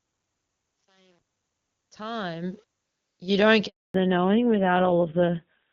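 It's a speech clip with three faults. The fade-in from the start to 2.84 s, just before "you don't", has truncation distortion, gritty and worst until 2.22 s, which points to a roughly 9-bit stage with no dither. Right after "you don't" there's a handover gap from 3.66 to 3.94 s, 280 ms of dead silence while the call switched networks. From 3.94 s to the end there's a fallback to narrowband, with nothing above 4 kHz and a duller, rougher sound that fits a drop from HD Voice to a low-rate AMR narrowband codec around 5.9 kbit/s.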